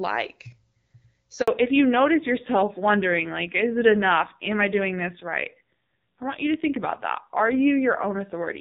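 At 1.42 s the call is handed between networks and no speech frames arrive. This handover gap of 60 ms cuts the speech to silence until 1.48 s.

From 1.48 s to the end, the call falls back to narrowband, leaving the lightly coded HD Voice start. Nothing above 4 kHz remains, so the speech turns dull and rough, which fits a roughly 5.9 kbit/s narrowband codec.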